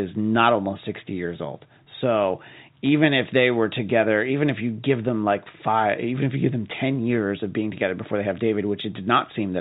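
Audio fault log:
1.84 s, packet loss with pitch repetition: 20 ms of audio went missing, which points to a single lost packet. The receiver bridged the gap by repeating the most recent pitch period of the speech, so the sound briefly holds and takes on a slightly buzzy, static character before normal speech resumes. The gap is too short for the repeated cycle to fade into silence. The G.711 telephone coding band limit at 4 kHz applies here as across the clip.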